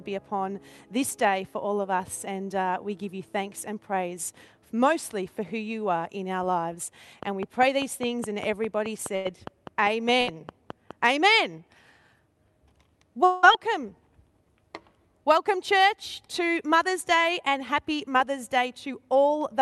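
From 7.23 s to 10.92 s there's a train of clicks: around twenty near-identical ticks at a steady 4.9 per second, poking out something like 10 dB above the sound and audible in the gaps too. That even spacing and uniform shape points to a repeating electrical pulse, likely interference from nearby gear or a faulty connection or power supply, rather than anything in the source.

Tucked inside that stretch are two bursts of packet loss. At 9.15 s about 100 ms never made it through. The receiver papered over 94 ms of it by stretching out the last bit of sound and letting it sag, so you get a brief held, fading smear, and then the audio picks up a little further along with that slice gone. The same thing happens again at 10.21 s, shorter this time, with 60 ms lost and concealed. Each burst sounds like a small stutter-skip.

At 13.25 s there's what sounds like a long network dropout, though at about 180 ms it's on the short side for one. 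Almost all of it, 179 ms, gets filled by the concealment, a drawn-out fading continuation of the last sound with no dead silence at all. When things resume at 13.45 s, that stretch is simply missing. The likely cause is a brief stall in the connection rather than a few stray packets.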